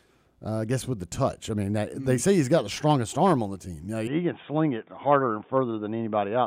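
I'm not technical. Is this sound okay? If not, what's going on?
No. At about 4.07 seconds the recording likely switched to a poorer microphone, an input switched to a poorer device. From there to the end, nothing above about 3.6 kHz gets through, so the speech turns dull and boxy, with a faint new background noise but no gap or loudness jump.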